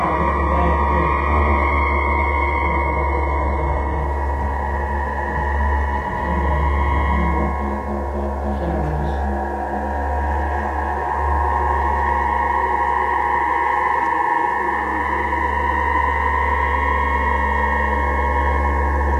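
Adaptive stream starting at a low bitrate, 0 to 4.0 s: highs end near 11.8 kHz and sound synthetic, which fits a low-bitrate start, then quality jumps up without a gap.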